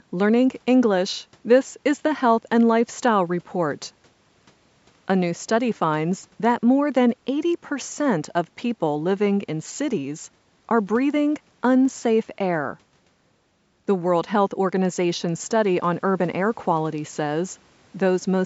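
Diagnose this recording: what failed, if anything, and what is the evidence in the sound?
Nothing failed: the speech went through normal call microphone processing, audible as a high-pass filter trimming the lowest bass, and that does not count as a fault.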